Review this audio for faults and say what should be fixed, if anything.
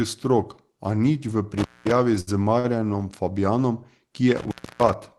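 Intermittent contact cuts the speech out at 1.58–1.91 s, open for about 210 ms, and again at 4.37–4.93 s, open for about 290 ms, with crackle at each break and remake. Unlike a dropout, the gaps carry faint hiss, not digital silence. Reseat or replace the loose cable or plug.

A short stall from a late packet holds the sound too long at 2.20–2.29 s, stretched by 68 ms, and at 2.59–2.66 s, stretched by 49 ms. The jitter buffer ran dry and repeated audio until the packet arrived. Unlike a cut, nothing is lost; the sound is just held, with a slight buzz or dip. A deeper jitter buffer or a steadier network link would prevent it.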